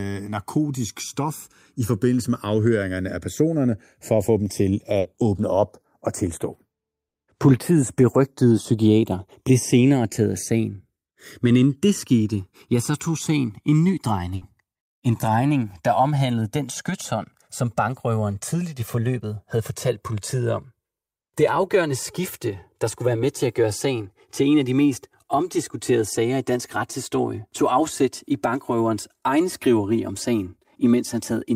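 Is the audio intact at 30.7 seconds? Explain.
No. At 30.7 seconds the speech carries channels drifting apart, which runs through the whole clip. The two sides run on mismatched clocks, roughly 150 ppm apart. By this point they sit about 4 ms apart, so sweeping comb notches give a slow flanging.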